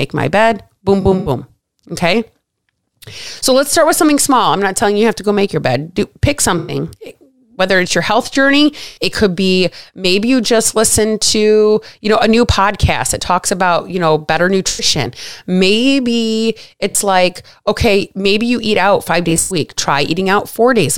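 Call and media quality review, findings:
AAC frame loss with concealment, six events: 1.01–1.30 s, 6.58–6.74 s, 8.88–8.98 s, 14.68–14.85 s, 16.91–16.95 s, 19.29–19.56 s. Smeared, noisy, phasey patches of 43 to 150 ms as the decoder rebuilds missing frames from the last good spectrum. At 1.01 s and 19.29 s the losses are scattered, with the longest run about a tenth of a second. No hard silence at the edges, which separates it from plain dropout or zero-fill.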